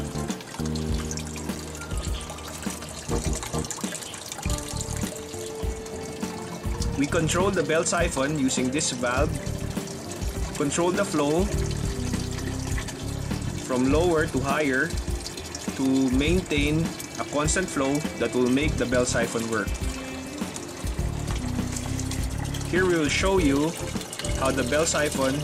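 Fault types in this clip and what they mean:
block of digital silence: a tick or dip at 1.55 s and again at 24.71 s, gaps of 5.3 ms and 4 ms. Zeros replaced the audio, either because an output buffer went unfilled in time or because a calculation gave invalid values. The first gap fits a 256-sample buffer.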